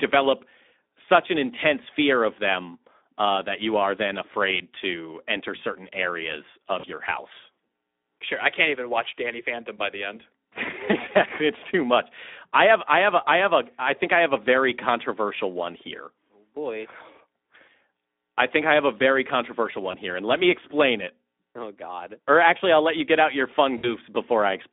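Speech that sounds hoarse, grainy and boxed-in, held to roughly 250 Hz–3.6 kHz, shows Speex codec damage, which fits a low Speex setting near 11 kbps. Brief buzzy or noisy smears that fade out and leave the voice weak come from VoIP packet loss concealed by the speech codec. They occur at 6.79–6.86 s between "to enter certain areas" and "your house", at 19.91–19.97 s after "have a very controversial" and before "here and let me", and at 23.77–23.90 s after "you get out your". These points to losses of about 40, 20 and 60 ms, bridged by the decoder.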